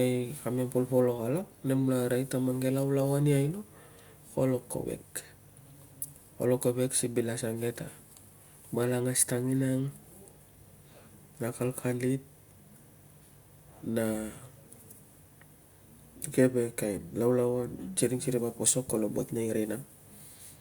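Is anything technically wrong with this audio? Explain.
No, nothing technically wrong stood out on listening to this speech recording.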